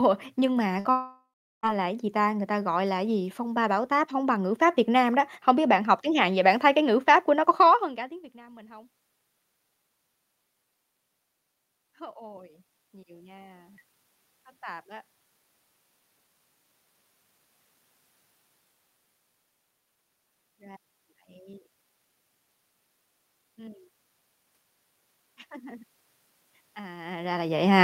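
A speech recording with two transmission faults near the start and two level changes later. From 0.79 to 0.88 s there is a burst of packet loss: the last sound is stretched into a fading concealment tail for about 55 ms, and about 60 ms of speech is skipped before the audio resumes. At 0.91 s the sound again turns into a fading concealment tail, then goes silent for about 370 ms. Audio returns at 1.66 s with roughly 720 ms missing, most likely a long network dropout. Automatic gain rising appears twice. From 11.79 to 14.91 s, voice and room noise swell together by about 5 dB. From 23.56 to 27.42 s they rise by about 4 dB. In both cases the background lifts with the speech, which separates these rises from the talker's own movement near 7.5 s and 27 s.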